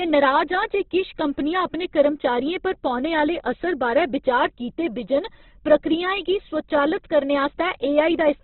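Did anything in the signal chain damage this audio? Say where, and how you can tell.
Yes. Opus compression throughout, at the codec stage: nothing above 4.1 kHz and grainy, rough band-filled tone, which points to music-mode Opus likely starved near 12 kbps.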